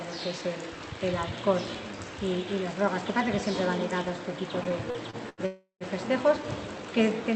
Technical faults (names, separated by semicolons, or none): repeated stalls (stutter); call audio freeze